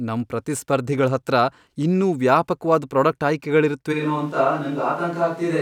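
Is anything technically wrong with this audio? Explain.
Yes. From 3.94 s to the end, the close microphone's feed likely dropped out and the recording fell back on a switch to a distant microphone, one sitting farther from the talker. Because that microphone hears more of the room, the speech turns suddenly roomy and hollow, loses bass, and drops by roughly 5 dB, while room noise rises to around 30 dB below the speech level.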